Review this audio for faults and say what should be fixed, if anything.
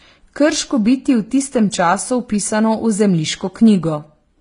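Throughout the speech, the top end stops dead at about 10.6 kHz, and two different kinds of coding smear sit on top of each other. That mix most likely comes from transcoding between lossy codecs, which fits a low-bitrate HE-AAC pass re-encoded to Vorbis. The second encoder wasted bits on the first one's artefacts and added its own, while the lower cut-off survived. Prevent it by encoding once, from the original uncompressed source.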